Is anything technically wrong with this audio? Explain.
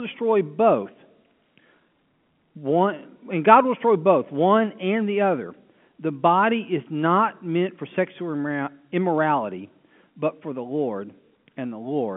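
No, nothing is technically wrong: the speech is simply telephone-band audio carried over G.711 A-law at 64 kbps, so nothing comes through above about 3.7 kHz, which is normal for that line.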